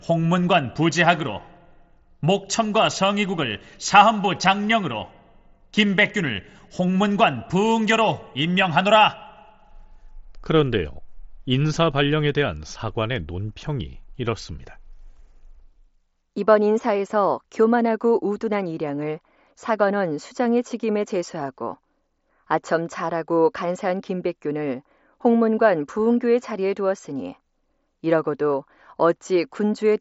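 No faults turn up in the speech, which arrives over a wideband Bluetooth mSBC headset link with nothing above about 7.7 kHz and the light graininess on louder passages that this codec normally leaves.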